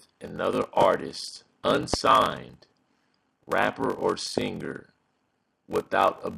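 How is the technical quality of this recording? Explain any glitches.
Not great. There's a steady buzz running through the whole thing, plus three loud pops on top.

The buzz comes from a block size mismatch with padding. One stage hands over shorter blocks than the next stage reads, and the shortfall gets filled with zeros. So every block carries a tiny gap, and those gaps repeat at about 46.9 Hz. That fits 1024-sample reads at 48 kHz. The stretching also slows everything to about 0.861 of normal speed, though the pitch stays roughly where it should be.

The loud pops land at 0.82–0.85 s, 1.94–1.96 s and 4.38–4.40 s, each a single sharp hit. The first two jump roughly 20 dB above the surrounding sound, and the third is a bit softer at around 15 dB. The sound carries on underneath each one. They're likely sudden voltage steps from a plug, switch, static discharge or driver glitch, which the downstream circuitry shaped into a quick click-thump.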